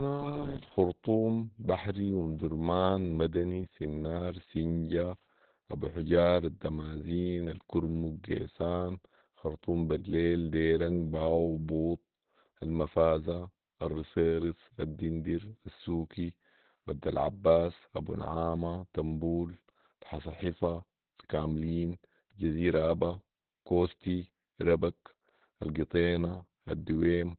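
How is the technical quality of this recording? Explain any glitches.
The technical quality is poor throughout. The speech sounds muffled, hoarse and faintly robotic, with nothing above 4.4 kHz, because of Opus voice compression: narrowband SILK coding at a rate consistent with about 8 kbps.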